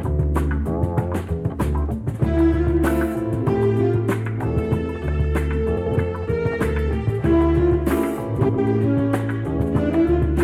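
At 5.76 s and again at 8.39 s, each time lasting 0.2 s to 5.96 s and 8.59 s, the sound briefly turns into a garbled flutter. Both are frames out of order. Two neighbouring blocks of roughly 93 ms each were swapped, which fits runs of four frames apiece. Each short stretch therefore plays with its halves exchanged, with seams at the start, middle and end. No time is lost.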